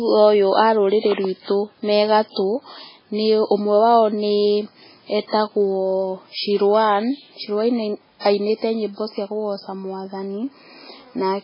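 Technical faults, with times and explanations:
Throughout, MP3 compression: watery, swirly speech with nothing above 5.3 kHz, likely from starved MP3 encoding near 16 kbps, dropping weak frequency lines frame to frame.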